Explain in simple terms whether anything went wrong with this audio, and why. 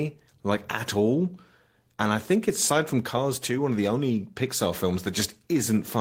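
Two things go wrong in this speech clip, one right after the other.

At 2.67 s there is a skip ahead: roughly seven tenths of a second of speech is simply gone, and playback jumps straight to later audio with no silence or filler in between. That missing pause is what separates it from a dropout, where you would hear a gap or a hiccup. Here the two sides of the cut are butted together, so the speech lurches forward abruptly.

From 2.93 s to 4.67 s comes a jitter buffer speed-up. The receiving end had built up more waiting audio than it wanted, so it trimmed out many tiny slices, each only a vocal cycle or a few long, adding up to roughly a seventh of a second. The speech plays about 8% faster and sounds slightly rushed, but the pitch stays the same. That unchanged pitch is what distinguishes it from tape-style speeding, which would also make the voice higher.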